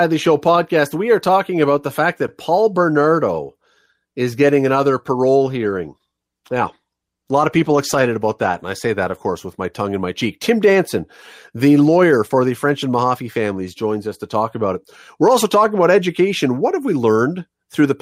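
From 5.46 s to 9.71 s, a call bitrate drop coarsens the speech encoding. The sound points to roughly 40 falling to 18 kbps. Quality returns by 9.71 s.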